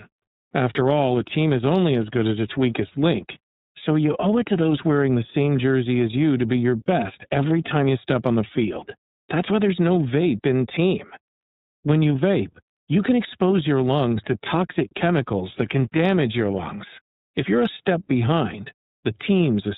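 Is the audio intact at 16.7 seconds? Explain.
No. At 16.7 s, as across the whole speech clip, the iLBC codec is audible. It codes each 30 ms frame's excitation independently and removes everything above 4 kHz, giving plainly audible narrowband, slightly rough, synthetic-sounding speech, which fits its 13.33 kbps mode.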